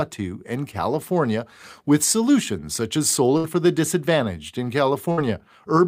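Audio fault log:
3.37 to 3.47 s and 5.12 to 5.20 s, burst of packet loss: after "with solutions such as" and "for the disadvantaged in", about 60 ms of held, fading sound; lost packets were concealed, then about 60 ms skipped.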